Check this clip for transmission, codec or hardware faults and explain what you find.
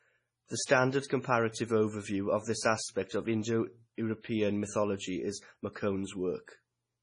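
One fault runs through the whole clip, with heavy MP3 compression the likely cause. Short of bits, the encoder cuts everything above 10.5 kHz. It drops quiet frequency lines that flicker between frames. The speech sounds watery and swirly, with metallic s sounds. The damage fits a bitrate near 24 kbps.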